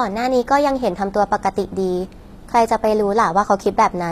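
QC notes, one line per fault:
Throughout, HE-AAC compression: the codec damage is plainly audible. Nothing sits above 14.9 kHz, and the s sounds come across gritty and lispy, with a metallic sheen on the top end. That's likely spectral band replication at work, with the treble copied up from lower bands and shaped by a coarse envelope rather than actually coded. The harmonics don't line up across the crossover, and the encode ran at a very low bitrate, around 24 kbps.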